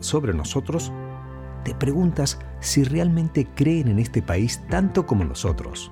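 No technical faults can be heard anywhere in this clip.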